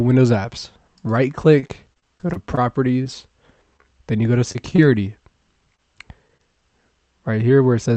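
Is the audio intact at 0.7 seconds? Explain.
Yes, at 0.7 seconds the audio is intact, with no dropout, glitch or distortion at that moment.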